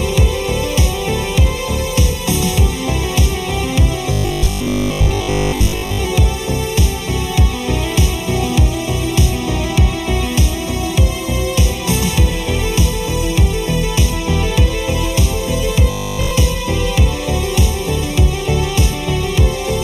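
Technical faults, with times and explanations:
Throughout, channel delay (comb filtering): one channel trails the other by a fraction of a millisecond. Summing them cancels shared content at evenly spaced frequencies, with the first notch near 1.5 kHz. The hollow, phasey colour stays fixed, unlike a sweeping flanger.
4.12–6.00 s and 15.91–16.31 s, robotic sound from repeated short buffers: a rigid metallic buzz at 50 Hz sets in, likely from a 20 ms buffer replayed in place of skipped audio. This covers most of the first stretch and all of the second, with no silent gaps, unlike dropouts.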